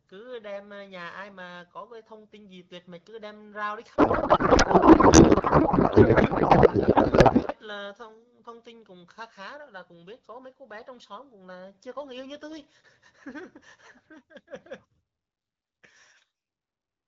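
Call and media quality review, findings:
Codec payload misread, 3.95 s to 7.53 s. Speech replaced by garbled noise and warble that barely follows the underlying speech. Probable component: AMR-WB payload packing between endpoints. The sound points to octet-aligned frames being parsed as bandwidth-efficient, which puts the frame fields at the wrong bit positions. Clears at 7.53 s once both sides agree on framing. Surrounding speech carries light AMR-WB coding, consistent with about 12.65 kbit/s.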